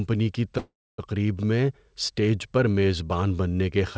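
From 0.58 s to 1.00 s the speech stalls in a call audio freeze. The last sound is stretched into a fading buzz or hiss that sinks to silence for about 0.28 s, likely because delayed packets let the jitter buffer run dry. Unlike a packet-loss dropout, nothing is cut: speech resumes exactly where it stopped, at "میں اسٹیج پر میزبان", now about 0.40 s late. The band-limit at 8 kHz is simply the wideband call codec.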